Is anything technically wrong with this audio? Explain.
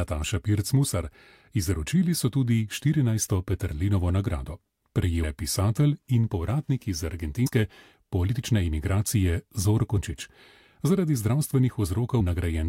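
Yes. Compressed frames are skipped at 5.23 s, 7.46 to 7.48 s, 9.96 s and 12.19 to 12.21 s. Whole blocks of encoded audio, consistent with 23.2 ms frames, never reach the output, so the sound jumps ahead by roughly 0.4 s, 0.1 s, 0.2 s and 0.1 s.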